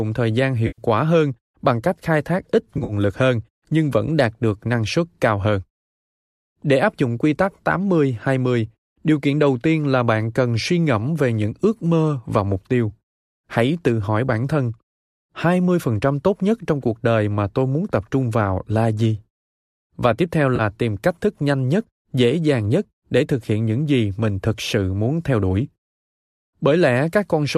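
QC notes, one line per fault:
0.67–0.82 s, 2.75–2.93 s, 20.56–20.61 s: AAC frame loss with concealment. About 110 ms goes after "thời gian", 90 ms is scattered over 140 ms (longest run around 50 ms) before "lực hơn nhưng vẫn", and 30 ms goes after "tiếp theo". The decoder patches each gap from the last good spectrum, so these sound like smeared, noisy, phasey blurs rather than the hard silence or click of a plain dropout. The faint graininess of the whole clip is likely light low-delay AAC coding at 64 kbps.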